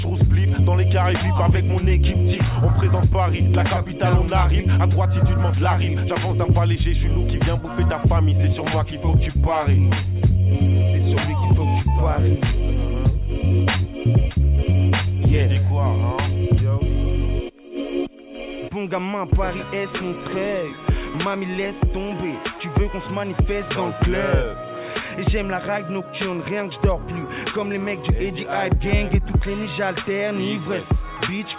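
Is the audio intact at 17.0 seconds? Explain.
Yes, the audio is intact at 17.0 seconds, with no dropout, click, distortion or other fault at that moment.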